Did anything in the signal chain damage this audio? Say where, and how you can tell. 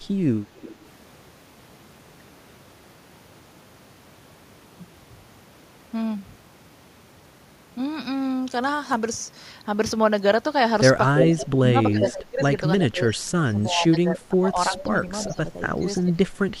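Yes, the damage is in call processing. An echo leak returns a delayed copy of the speech: faint at 0.62–0.76 s, about 367 ms late, then as loud as the talker at 11.15–11.45 s, with faint scraps at 14.75–14.83, 15.23–15.34 and 15.97–16.02 s, each 342 ms late. The likely cause is a loudspeaker-side echo canceller passing residual pickup.

Speech is suppressed in double talk between 11.34 and 16.19 s. The talker's level dips in pieces, down by as much as about 20 dB and for roughly 3 s in total, while the far side is playing on the loudspeaker. The canceller likely could not separate the talker from the echo and attenuated both.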